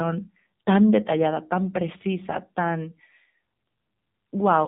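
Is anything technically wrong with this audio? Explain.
Yes. Throughout the speech, the sound carries AMR narrowband mobile codec damage. Nothing passes above 4 kHz, and a vocal-tract model built from sparse pulses leaves the voice plainly buzzy and synthetic, fitting a low mode near 7.4 kbps. A simple low-pass filter would dull the sound without that buzz.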